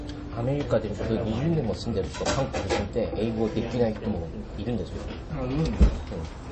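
Throughout the clip, nothing is heard above 8.3 kHz, and weak detail swirls and chirps metallically. This plainly audible damage is likely MP3 compression at a low bitrate, around 32 kbps.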